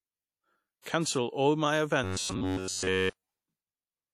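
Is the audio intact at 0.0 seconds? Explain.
No. From 0.0 s the whole speech clip carries plainly audible damage, likely WMA compression. The sound rings and smears, with hiss that swells and fades with the speech. There is nothing above 16.7 kHz, which fits a low bitrate near 48 kbps.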